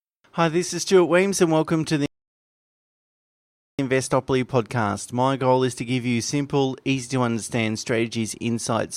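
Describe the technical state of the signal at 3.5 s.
At 3.5 s the speech is silent, in the middle of a playback stall running from 2.06 to 3.79 s, just after "and welcome to the". The output stops dead for about 1.7 s. The player likely ran short of data or was blocked. It then resumes.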